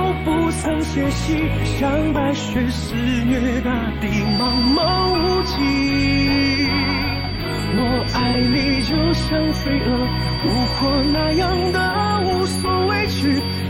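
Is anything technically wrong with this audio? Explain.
Yes, there's a feedback whistle from about 4.18 s right to the end: a thin, steady 4.6 kHz tone sitting roughly 10 dB under the sound, swelling and fading slowly in level. Likely a speaker-to-mic loop hovering right at the edge of feedback without tipping over.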